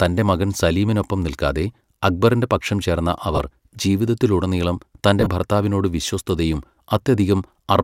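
Lost LE Audio frames around 3.36 s, just after "നിൽക്കാതെ അക്ബറിന്റെ പക്ഷം ചേർന്ന", and scattered from 5.20 to 5.27 s before "ഭർത്താവിനോട് വിശ്വസ്തയും". The decoder refills the gaps with a random-signed copy of the last spectrum, so brief noisy smears replace the sound.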